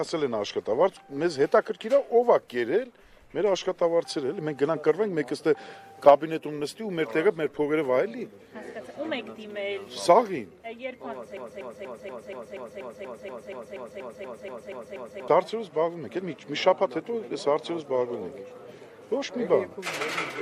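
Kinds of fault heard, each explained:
Broken-record loop: from 11.37 to 15.28 s the sound catches on a fragment about 0.24 s long and plays it 16 times back to back, each pass identical, so it stutters in a fixed rhythm of roughly four repeats per second. Whatever should have filled those four seconds never arrives. The likely cause is a player or stream that stalled and kept resending the last chunk it held until fresh data came in.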